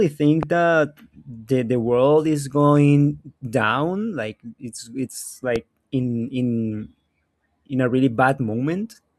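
Loud pops at 0.43 to 0.45 s and 5.56 to 5.58 s: a sudden voltage pulse, likely from a plug, switch or static discharge, lands on the signal as a single sharp pop, the first clearly louder, while the speech continues underneath.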